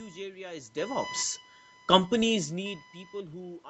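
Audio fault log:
Throughout: computer activity noise. A buzzing whine sits under the speech and comes and goes with the computer's load, not with the talking. Current drawn by the processor, graphics card or mouse shifts the shared ground of the audio circuit, and the audio picks that up. On a spectrogram it shows as a thin tone near 1 kHz with harmonics. The waveform shows a fine ripple about 20 dB below the speech that persists through pauses.
2.1–3.7 s: automatic gain rising. The input level dropped by about 19 dB, which fits the talker shifting away from the microphone around 2.5 s. The automatic gain control judged the signal too quiet and raised its gain step by step, so the speech, the room noise and the computer whine swell together until the clip ends. On a waveform the envelope climbs smoothly, and the spectrogram brightens across every band at once, with nothing above 8 kHz.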